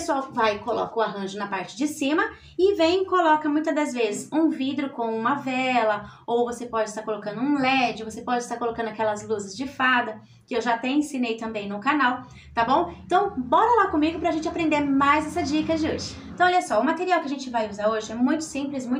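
No technical faults can be heard anywhere in the recording; the signal stays steady and intact throughout.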